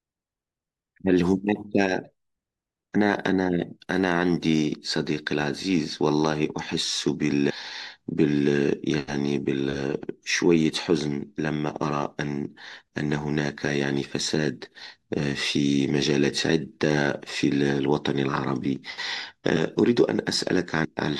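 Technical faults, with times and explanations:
19.57 s and 20.85 s: compressed frames skipped. The speech jumps ahead by about 150 ms each time, which fits several whole 32 ms frames going missing or being rejected by the decoder.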